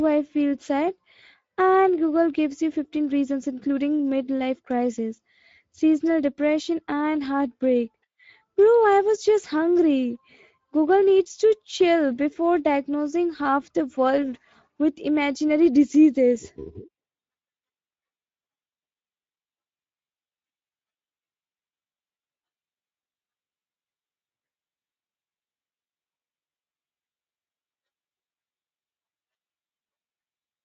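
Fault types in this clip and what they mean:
Speex codec: This old CELP voice codec is clearly audible here. The speech has that grainy, hoarse edge from a thin excitation budget, which fits a mid setting of around 17 kbps. Nothing exists above 7.7 kHz.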